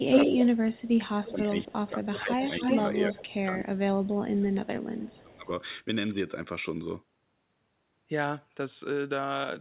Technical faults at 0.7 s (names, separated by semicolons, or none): speech suppressed in double talk; echo leak